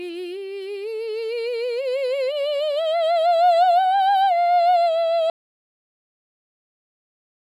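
At 5.3 s the music cuts off abruptly and the rest of the clip, about 2.1 s, is silence with no room tone underneath. This is an audio dropout to silence: the input was likely lost, through a disconnected device or failed link, while recording carried on writing silence.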